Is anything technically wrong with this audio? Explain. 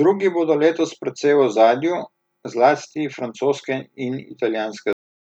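Yes. The speech has a cut-off end at 4.93 s: the final buffers were never written, so the sound halts mid-syllable and drops straight into digital silence for the last 0.42 s. Unlike a fade-out or a natural pause, nothing decays first.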